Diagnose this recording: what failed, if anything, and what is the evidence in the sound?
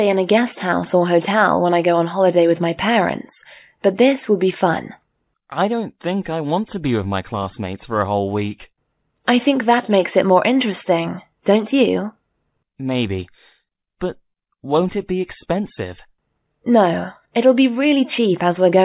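Nothing failed, and the sound gives no evidence of a fault at any stage.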